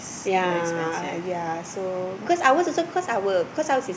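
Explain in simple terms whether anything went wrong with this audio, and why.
Nothing went wrong: no audible technical faults anywhere in the recording.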